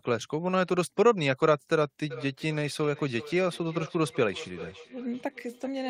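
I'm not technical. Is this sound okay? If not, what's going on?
No. From 2.1 s to the end, the speech comes back as a feedback echo between two devices: a second device on the call replays it, the first device's microphone catches it, and each repeat returns about every 0.4 seconds, quieter than the speech and thinner.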